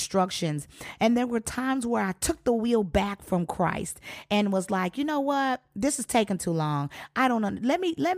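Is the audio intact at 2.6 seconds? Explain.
Yes, at 2.6 s the speech plays through cleanly, with no dropout, click, distortion or other fault to be heard at that moment.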